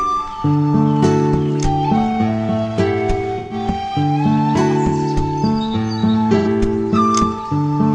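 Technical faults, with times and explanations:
3.38–3.54 s and 6.37–6.47 s, AAC frame loss with concealment: two brief gaps, about 128 ms and 85 ms long, where the decoder lost whole AAC frames and patched them from the last good spectrum rather than going silent. The lengths fit roughly three and two frames' worth. Because the fill reuses old spectral content with scrambled signs or interpolated energy, each patch comes out as a short smeared, noisy or phasey blur, not a clean dropout.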